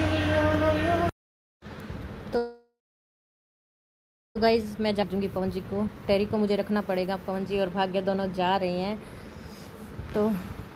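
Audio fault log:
2.37 to 4.37 s, call audio freeze: sound stops and a brief fading tail gives way to about 1.6 s of silence. Likely held-up packets emptied the jitter buffer. Nothing is lost.
4.47 to 8.84 s, jitter buffer speed-up: playback runs at 116% with unchanged pitch. Tiny pitch-period slices are trimmed repeatedly, removing roughly 0.7 s of backlog.
5.02 s, skip ahead: playback jumps forward almost seamlessly. About one and a half seconds of audio is dropped.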